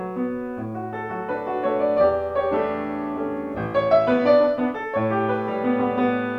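Nothing goes wrong anywhere in this clip, so there's simply no fault to point out at any moment.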